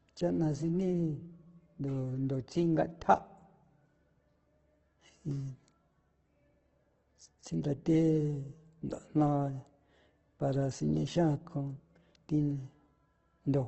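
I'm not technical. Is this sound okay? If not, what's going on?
No. Throughout the speech, the sound is grainy and rough with nothing above 8.2 kHz, which points to heavy, likely Opus compression squeezed hard.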